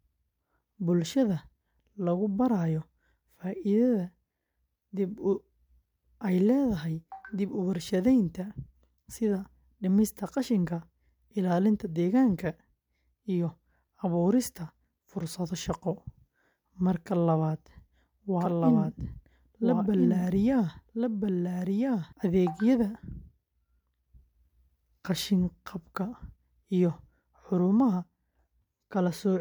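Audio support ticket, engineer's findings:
Doubled audio track, 18.41 to 22.13 s. Likely cause: a second, slower capture path mixed in, or an edit holding two copies out of step. Result: a full-band copy of the speech trailing by about one and a half seconds, roughly 5 dB under the original, with no decay or room colour. The copy cuts in and out abruptly at both ends of the span.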